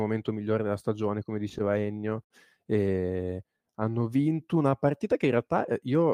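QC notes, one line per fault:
1.49–2.32 s, repeated stalls (stutter): right after "migliore della stagione come" the speech hitches about 11 times. The jitter buffer kept running dry, so the receiver stretched the last sound to cover each gap, about 171 ms in all, longest about 65 ms. Nothing's lost, but it drags and stutters.
3.27–4.71 s, jitter buffer slow-down: leading into "partita che in" the speech slows to about 88% speed at unchanged pitch. The buffer was building up reserve by repeating single pitch periods and bits of pauses, adding about 181 ms, so sounds come out drawn-out.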